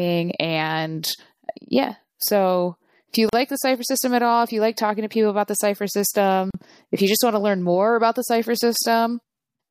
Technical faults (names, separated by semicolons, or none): gap at a join of encoded pieces